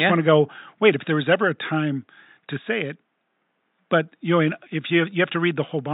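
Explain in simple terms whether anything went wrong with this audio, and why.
Nothing went wrong here.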